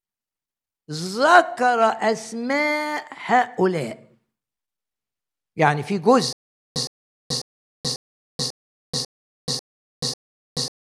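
Stutter with silent gaps from 6.33 s to the end: playback likely stalled, replaying a 113 ms burst of speech eight times, each followed by about 431 ms of digital silence.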